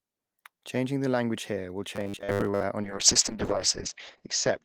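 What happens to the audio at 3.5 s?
A call bitrate drop is under way at 3.5 s, lasting from 2.85 s to 4.65 s. The bandwidth estimate falls, cutting the encoder from 32 to 7 kbps, so it codes coarsely and drops everything above 8 kHz, leaving the speech rough, watery and muffled.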